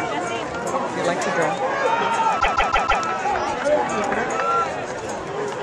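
At 2.39 s the audio falls into repeated frames: a block of about 157 ms plays, then plays again four more times in a row, running to 3.02 s before the sound moves on. This happens when a short run of compressed frames, consistent with roughly six codec frames, is written or delivered more than once, so the decoder reproduces identical material back to back. It sounds like a rhythmic stutter at about six repeats per second, and it stretches the clip by about 0.63 s.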